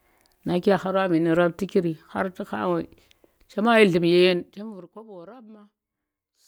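Speech recording with zipper noise from 4.2 to 5.02 s, starting just after "chema yi nllu̱m ye". The level drops by roughly 20 dB in unsmoothed 1 dB steps, around fifty per second, so each jump leaves a small click and the run of clicks is heard as a zipping texture over the voice. The step rate points to gain being updated once per buffer rather than ramped.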